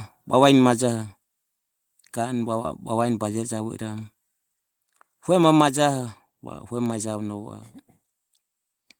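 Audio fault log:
1.02 s and 5.61 s, microphone volume stepped down: the whole signal, voice and background noise together, drops abruptly in level with no fade, by about 2 dB at the first point and about 4 dB at the second, and it stays at the lower level afterwards. Each change is a single instant step, likely the call software's automatic gain control cutting the device's input volume because it judged the microphone too loud.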